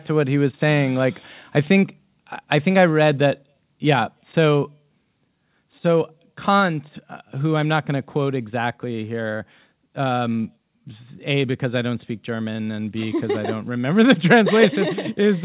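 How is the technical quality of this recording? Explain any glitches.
The speech comes through a narrowband call path, G.711 mu-law by the sound of it, so there's nothing above 4 kHz. The real glitches are three microphone volume steps down.

At 2.91 s, right after "think I think I", the level drops by about 1 dB. It drops again by about 2 dB at 6.6 s, just before "uh who I'm not", and by about 3 dB at 14.76 s, after "remember the". Each time the voice and the background fall together in one instant step. The likely cause is the call software deciding the mic was running hot and pulling the device's input volume down a notch.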